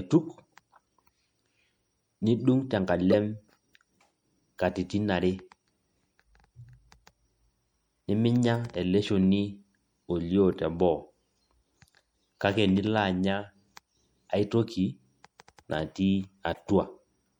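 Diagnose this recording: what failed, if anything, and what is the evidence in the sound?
The codec stage, likely MP3 compression at a low bitrate, plausibly around 64 kbps, has thinned the speech throughout. Starved of bits, the encoder clips the treble and lets weak frequency lines drop in and out between frames, giving plainly audible watery, swirly sibilants and softened attacks.

Also at the codec, a corrupt frame decoded: the decoder played damaged data, misplacing energy in frequency. From 3.12 to 3.14 s a loud error spans a couple of frames; from 16.54 to 16.59 s a much fainter one, far below the first, does the same.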